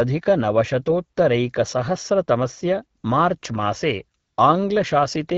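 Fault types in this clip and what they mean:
AMR comfort noise: The phone judged the talker silent and stopped sending speech frames. The receiver filled each gap with smooth synthetic noise in place of the real background. This happens three times: 2.99 to 3.03 s, near 3.39 s, and 4.19 to 4.37 s.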